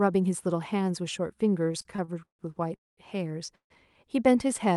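Speech over a call path whose spectrum stops near 12 kHz, consistent with an Opus call codec. From 1.67 to 2.41 s the speech shows repeated stalls (stutter): eight short breaks, the longest 138 ms, in which the last sound is stretched out, filling about 37% of that span. This happens because late packets kept draining the jitter buffer. On a spectrogram this shows as smeared, held harmonics interrupting the speech pattern. Then two call audio freezes stop the speech outright, at 2.75–2.99 s and 3.55–3.72 s. Each resumes where it left off with nothing missing, and the waveform drops almost flat for about 210 ms and 110 ms, which shows as blank columns on a spectrogram. The likely cause is packets held up in transit, emptying the jitter buffer.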